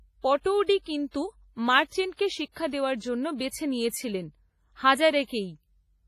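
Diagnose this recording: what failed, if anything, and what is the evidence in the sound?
The codec stage failed throughout the speech. It sounds washy and ringing, with hiss breathing around each syllable and nothing above 15.3 kHz. This is likely WMA compression at a starved rate, near 24 kbps. Long transform blocks smear quantisation noise, and weak components vanish.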